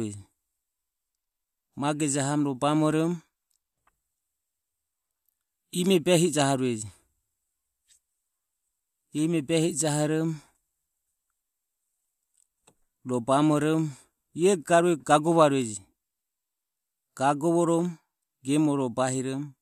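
No technical faults are audible.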